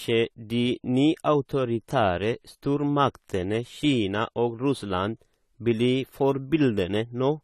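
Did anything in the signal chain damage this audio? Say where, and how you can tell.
Yes. The damage most likely comes at the codec stage, from AAC compression at a low bitrate, perhaps around 32 kbps. Throughout the speech the top end is dull and smeared, and sibilants carry a fizzy, warbling texture where the coder has thinned or noise-filled its spectral bands.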